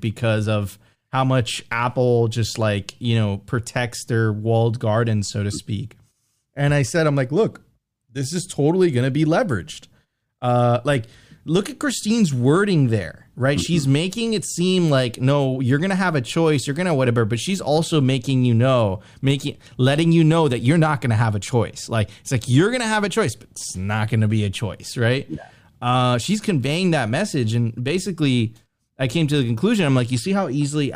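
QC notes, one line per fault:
No fault found.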